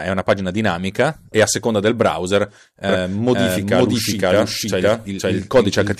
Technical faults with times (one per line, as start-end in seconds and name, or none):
2.89-5.99 doubled audio track